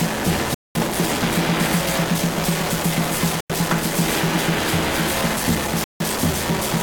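At 0.54 s the music just cuts out for about 0.21 s, back at 0.75 s; again at 3.41 to 3.50 s, a shorter 93 ms hole; and once more from 5.84 to 6.00 s, about 0.16 s. Each gap has hard edges or a fade of a few milliseconds, and the music comes back further along, as if it kept playing underneath. That pattern points to a likely Bluetooth dropout, where packets missed the headphones' deadline and got thrown away.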